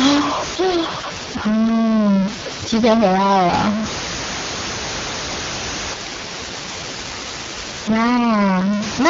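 Right from the start and through the whole clip there's a distorted edge riding on the speech, and the quiet gaps between phrases aren't clean either: they're filled with noise that shouldn't be there. The likely cause is a stuck bit, where one bit of every sample is held at 0 or 1 by a broken data line or converter. Roughly half the samples end up off by that bit's fixed amount in a pattern set by the waveform, which gives the distortion. Near silence the error flips with the sign of tiny values, so pauses turn to noise.

From 0.55 to 3.54 s the speech suddenly goes rougher and more synthetic, with a raspy vocoder character, though the bandwidth stays put and nothing drops out. That's an AMR rate drop. The link seems to have weakened, so the network pushed the AMR-WB codec down from its clean 23.85 kbit/s mode to about 6.6 kbit/s and spent the freed bits on error protection. At 3.54 s it snaps back to the clearer HD Voice sound.

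Then it happens again from 5.93 to 8.74 s: same rate drop, same slide into that rough, raspy, synthetic texture. It sounds like the same step down from 23.85 to roughly 6.6 kbit/s, recovering just before the end. Outside those two windows the AMR wideband codec itself sounds clean at its top rate, but the stuck-bit distortion underneath never goes away.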